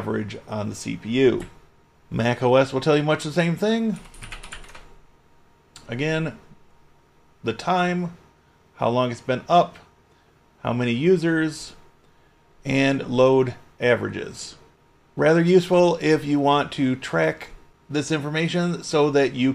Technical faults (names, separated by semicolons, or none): none